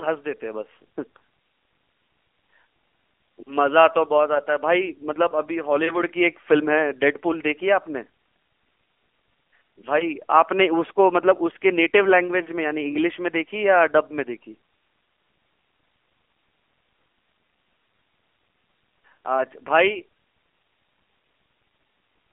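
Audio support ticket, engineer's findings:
AMR narrowband mobile codec throughout. Band limited to roughly 300 Hz–3.4 kHz, nothing above 3.4 kHz. Buzzy, synthetic texture on the speech from a pulse-excited vocal-tract model. Damage plainly audible, which fits a low mode around 7.4 kbps. Mobile leg of the call path.

Wireless microphone noise hit, 9.82–10.07 s, about 0.25 s long. Short swish of static over the speech. Analogue FM radio mic: a multipath fade drops the received signal, so receiver noise rises and briefly masks the audio. Check receiver placement and antenna diversity.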